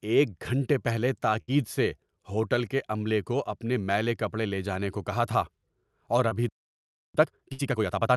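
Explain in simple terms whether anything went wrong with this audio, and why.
Burst of packet loss, at 1.41 to 1.50 s and again at 7.53 to 7.61 s. In each case a few packets in a row never arrived in time, leaving a hole of about 60 ms. The receiver covered it by stretching out the last bit of speech and letting it fade. You hear a short held buzz or hiss, and then the speech picks up slightly further along, with that small piece missing.

Short concealed packet loss, at 6.29 to 6.33 s. This is a smaller hole of about 20 ms. The receiver patched it by continuing the sound just before it and then blending back into the real audio. The result is a quick smear or wobble lasting a few hundredths of a second, and a short consonant could disappear inside it.

Playback stall, at 6.49 to 7.15 s. The audio cuts out in mid-flow for about 0.66 s of silence. This is likely because the player ran out of incoming data, or was briefly held up, and had nothing to play until it recovered. 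When the sound returns, it carries on from where it left off, so the listener is now behind.

Time-compressed catch-up, from 7.15 s to the end. To make up for the stall, the player trims tiny slices out of the backlog and stitches the rest together. The speech runs about 1.5 times faster than normal while keeping its normal pitch, so it sounds rushed. The second packet-loss burst at 7.53 s falls inside this hurried stretch.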